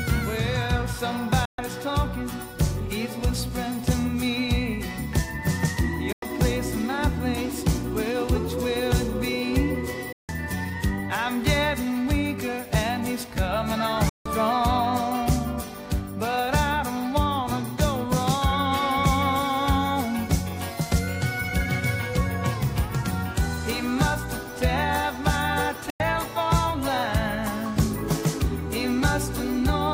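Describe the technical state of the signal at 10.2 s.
At 10.2 s you're right in the middle of a digital broadcast dropout, running from about 10.12 to 10.29 s. The receiver stopped getting clean frames, either because the signal went or because frames failed their checksum, so it muted until good data came back. The sound dips out in a quick fade of about 3 ms and leaves a silent hole of roughly 160 ms, which fits around five lost frames. Whatever was sent during that gap is gone.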